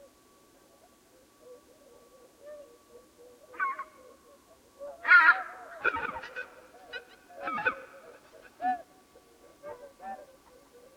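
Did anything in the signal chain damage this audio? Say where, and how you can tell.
Yes. The damage is at the converter, where periodic clock jitter starts at 5.82 s and runs to the end. A rough, metallic edge clings to the sound and vanishes in silences. Interference near 1 kHz is wobbling the sample clock, so every component sprouts sidebands at that spacing, strongest on high frequencies.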